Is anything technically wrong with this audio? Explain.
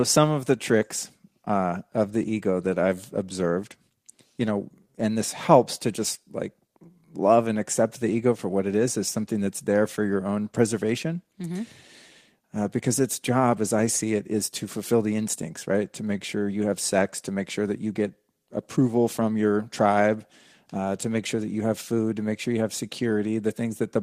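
No, nothing in this speech recording stands out as technically wrong, so there's nothing here to flag.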